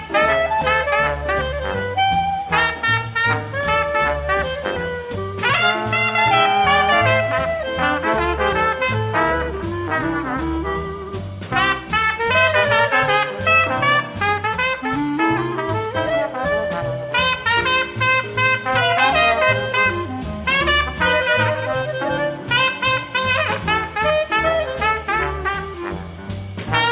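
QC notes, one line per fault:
No faults found.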